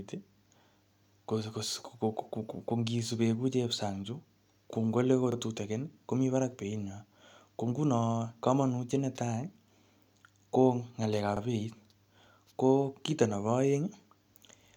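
A speech clip with two brief stutters, at 5.32 to 5.37 s and 11.37 to 11.41 s, where about 44 ms of sound plays twice. These are overlapping chunks: the audio was handled in 6-second chunks, each starting slightly before the previous one ended.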